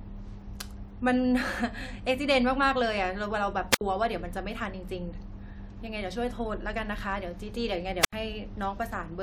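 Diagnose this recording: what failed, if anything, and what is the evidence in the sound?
A brief burst of hiss followed by a hole of near silence cuts into the speech at 3.71 to 3.81 s (about 68 ms muted) and 8.00 to 8.13 s (about 80 ms). This is a wireless microphone squelch dropout: the analogue FM radio link faded and the receiver's squelch muted the output.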